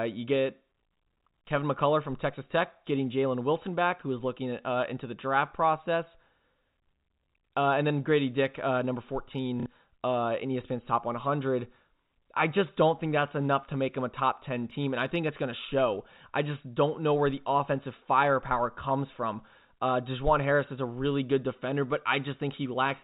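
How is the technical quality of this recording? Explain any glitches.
The recording has one glitch, heard over telephone-band audio that stops around 4 kHz. From 9.6 to 9.66 s, between "uh number" and "uh in", packet loss with last packet repeated fills a 60 ms gap by replaying the previous packet. That gives a brief robotic stutter buzzing at about 33 Hz, which fits 30 ms packets.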